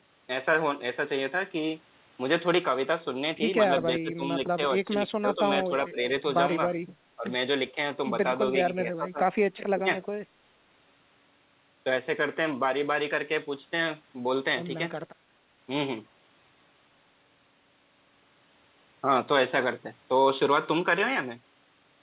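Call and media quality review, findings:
Speech suppressed in double talk: level dips of about 5 to 15 dB at 4.0–4.23, 4.56–6.0, 7.16–7.26, 7.72–7.77, 8.66–9.22 and 9.74–9.88 s. Likely echo canceller ducking near-end during overlap.

Echo leak: faint delayed copy, about 25 dB below speech, at 9.56–9.6 and 10.02–10.06 s. Likely residual loudspeaker echo, 382 ms late. The discrete lag separates it from room reverb.

The call path is band-limited to 4 kHz, which fits G.711 mu-law.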